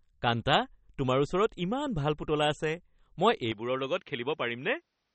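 A speech clip carrying two faults, the first likely MP3 compression at a low bitrate applied across the whole recording. The encoder, short of bits, has discarded everything above 8.4 kHz and thinned out weaker frequency content frame by frame, which fits a rate around 32 kbps. The damage is plainly audible throughout. The voice is dulled at the top, with a watery, swirling texture and smeared attacks, and sibilants lose their crisp edge. At 3.52 s the system likely switched its input to a poorer device, and that lower-quality path continues to the end. There is no gap at the changeover. The band abruptly narrows further, with nothing above 6.7 kHz, so the voice turns duller and boxier. It also drops by roughly 5 dB and picks up a faint new background noise sitting far below the speech.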